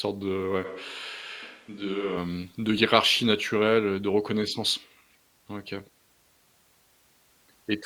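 Right after "de ouais", at 0.66 s, the voice suddenly goes roomy and hollow, loses its low end and drops by roughly 5 dB. The background room noise comes up to sit only about 30 dB under the speech. That's the classic sound of a switch to a distant microphone, with the close mic likely dropping out and a farther one taking over. It snaps back at 2.15 s, just before "hem de hiérarchie naturelle".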